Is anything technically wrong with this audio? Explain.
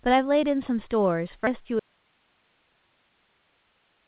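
Yes, there are two faults.

At 1.47 s there is a skip ahead. About a fifth of a second of speech is missing. Queued audio was dropped, and playback jumps forward with no gap.

From 1.79 s to the end there is an audio dropout to a faint residue. The speech cuts out abruptly, leaving only hiss far below the speech level. The likely cause is a lost signal on a path that stayed live.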